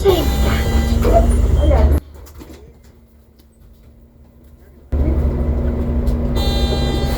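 One channel inverted, from 1.98 to 4.92 s: across this stretch the sound drops by about 27 dB, leaving only a faint residue. The likely cause is one stereo channel flipped in polarity, so material shared by left and right cancels once the two are summed to mono. Only the difference between the channels survives, which explains the weak remnant until full level returns at 4.92 s.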